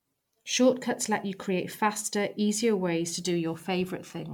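A short speech recording that has generation loss all the way through. It sounds swirly and hollow, with smeared consonant attacks and a watery haze that's worse than a single decent encode would give. There's nothing above 19.9 kHz, and the character fits a 128 kbit/s MP3 that was likely decoded and re-encoded around ten times. Each pass lands on a different frame grid, so the quantisation noise and spectral holes keep piling up.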